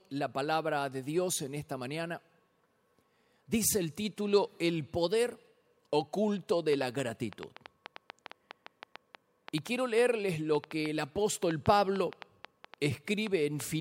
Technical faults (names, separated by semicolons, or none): train of clicks